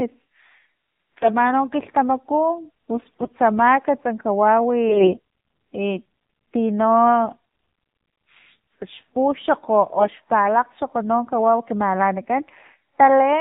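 AMR narrowband mobile codec throughout: nothing above 4 kHz comes through, and the pulse-driven vocal-tract model leaves the speech buzzy and synthetic, which fits a low rate around 7.4 kbps.

AMR bit errors at 1.16–1.29 s, 2.96–3.38 s, 4.89–5.18 s and 9.98–10.18 s: flipped, weakly protected bits misplace excitation pulses and skew gain and spectrum values, so the speech keeps pitch but turns hoarse and gargly, roughest near 4.89 s.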